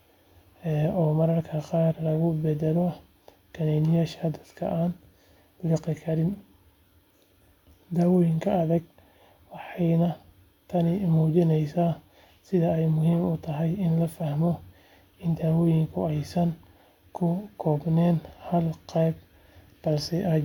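Nothing in the speech stood out as a technical fault on listening.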